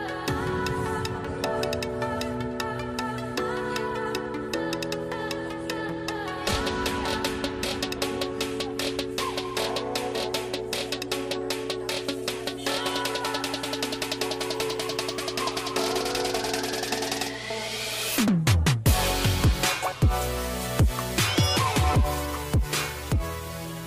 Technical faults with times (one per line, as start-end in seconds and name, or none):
0.00-23.87 mains hum